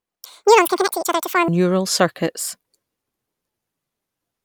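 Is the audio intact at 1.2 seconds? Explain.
No. At 1.2 s the speech is in a stretch of audio read two samples at a time (double speed), running from 0.0 to 1.48 s. Each pair of samples is consumed as a single frame, so playback runs at 2x, a full octave (12 semitones) high.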